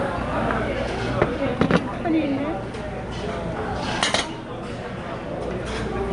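From start to finish this everyday sound has a rough, hissy halo and a smeared, watery blur, with nothing above 10.7 kHz. That's likely Nellymoser compression from the old Flash Asao codec, which codes short blocks coarsely and fills starved bands with noise. The damage fits a rate of around 44 kbps.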